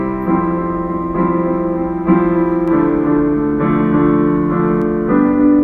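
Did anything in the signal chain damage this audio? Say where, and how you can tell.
Yes, there's a doubled audio track from 2.68 to 4.82 s. A second, full-band copy of the sounds trails by roughly a third of a second, a few dB quieter, with no decay or room colour, and it cuts in and out abruptly. Most likely a slower second capture path or a misaligned edit.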